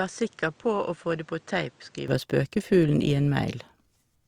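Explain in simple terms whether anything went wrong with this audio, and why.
From the start to 2.08 seconds, the speech sounds duller, quieter and a bit noisier, with the highest tones missing. At 2.08 seconds it clears up with no gap. The likely cause is an input switched to a poorer device.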